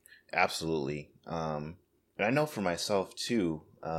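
Nothing goes wrong anywhere in this bit of speech, so there's nothing to point to.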